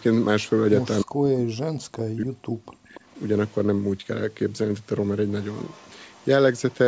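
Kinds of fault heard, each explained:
Echo leak: Faint scraps of the speech return about 286 ms later, roughly 25–35 dB down, likely uncancelled loudspeaker pickup; a distinct repeat, not a smooth reverb tail.
Speech suppressed in double talk: From 1.02 to 2.96 s the speech ducks by up to about 40 dB, likely the canceller muting overlapping talk.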